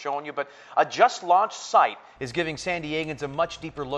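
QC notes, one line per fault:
0.00–2.16 s, input switched to a poorer device: nothing above 7.6 kHz, so the sound is dull and boxy with a very faint added noise, then opens up at 2.16 s with no gap or level jump. It's likely a narrower-band mic or headset.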